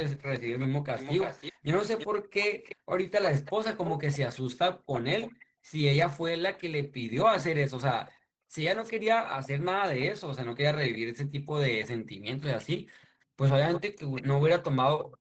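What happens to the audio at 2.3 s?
At 2.3 s two faults overlap.

A delayed second copy of the speech runs underneath the direct sound, trailing it by about 332 ms and sitting around 10 dB lower. It is present from 0.3 s to 5.44 s, so 2.3 s falls well inside it. This is an echo leak, likely from the far end playing the call on a loudspeaker. There, the echo canceller failed to fully subtract what its microphone picked up, so the residual was transmitted back as a lagging repeat.

Between 1.53 s and 2.9 s the room background also drops away. This is background gated by the echo canceller. While it judged loudspeaker playback to be active, the canceller pulled the microphone level down hard, by as much as about 40 dB at the deepest point. The ambience dips or vanishes for roughly half a second in total across that span, then returns when the gate releases.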